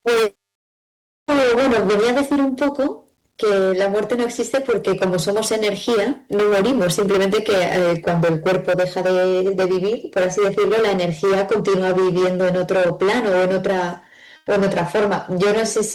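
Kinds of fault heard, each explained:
Hard clipping: The speech was pushed about 20 dB beyond what a stage in the chain could pass, so every peak was sheared flat at the ceiling, with close to a third of the waveform over the limit. Those squared-off tops add dense high harmonics, and the result is a constant harsh fuzz on everything loud rather than an occasional crackle, grinding through each syllable across the whole clip.
Comfort noise in place of the background: For 110 ms, from 14.36 to 14.47 s, the real background, sitting about 35 dB below the loud speech, drops out and is replaced by a smooth, even hiss about 5 dB quieter, with none of the room's texture. This is likely the Opus encoder's discontinuous transmission stopping audio during a detected pause while the receiving end generates shaped filler noise until sound returns.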